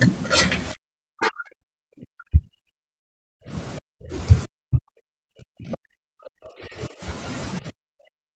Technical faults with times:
0.72-3.53 speech suppressed in double talk
2.99-3.41 long network dropout
3.80-4.15 speech suppressed in double talk
4.47-7.02 speech suppressed in double talk
5.72-5.77 other side's voice leaking through
7.60-8.35 speech suppressed in double talk

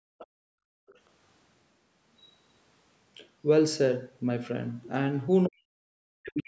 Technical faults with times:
0.00-0.87 background gated by the echo canceller
0.18-0.27 other side's voice leaking through
0.87-0.99 other side's voice leaking through
5.46-5.78 speech suppressed in double talk
6.20-6.48 speech suppressed in double talk

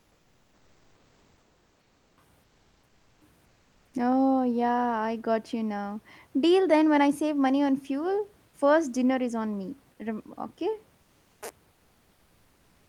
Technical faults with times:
0.00-2.17 comfort noise in place of the background
2.43-3.93 comfort noise in place of the background

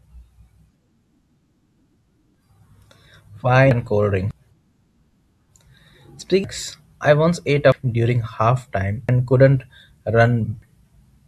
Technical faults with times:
2.35 compressed frames skipped
3.71 compressed frames skipped
4.31 compressed frames skipped
6.44 compressed frames skipped
7.72 compressed frames skipped
9.09 compressed frames skipped
10.62 compressed frames skipped

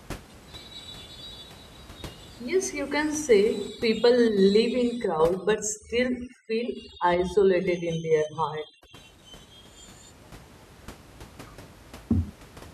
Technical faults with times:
3.68-8.97 overdone noise removal

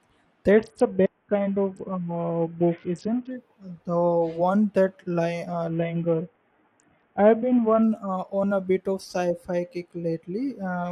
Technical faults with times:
0.51-3.31 Bluetooth SBC bit pool drop
5.69-7.83 Bluetooth SBC bit pool drop

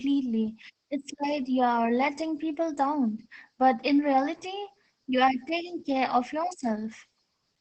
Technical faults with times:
0.00-7.60 Opus voice compression

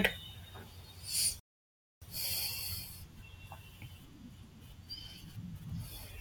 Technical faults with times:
1.40-2.02 rebuffering stall

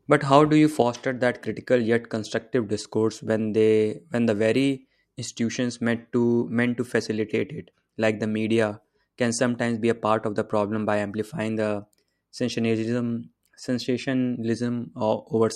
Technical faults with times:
0.82-15.55 one channel drops out

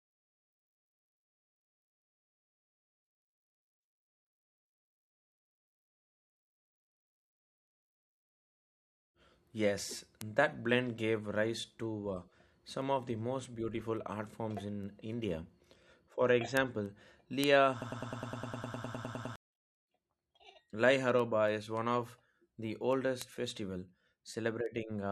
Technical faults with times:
17.82-19.36 broken-record loop

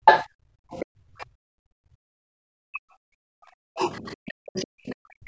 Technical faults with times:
0.00-0.69 speech suppressed in double talk
0.05-1.26 other side's voice leaking through
0.90-2.44 background gated by the echo canceller
2.72-5.28 speech suppressed in double talk
3.93-4.91 other side's voice leaking through

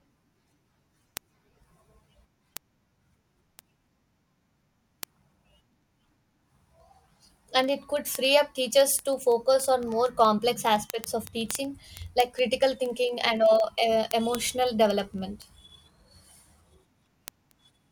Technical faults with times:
0.15-17.89 word clock ticks

